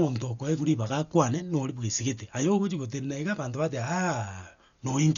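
Throughout the speech, nothing sounds above 6.9 kHz, so it is dull. Tones carry a rough, fluttering noise. The likely cause is heavy Dolby Digital compression, which fits a bitrate near 48 kbps. Starved frequency lines get filled with dither noise.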